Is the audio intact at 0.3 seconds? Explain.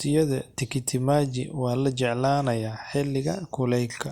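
Yes, the speech at 0.3 seconds plays through intact, with no dropout, click, distortion or other fault at that moment.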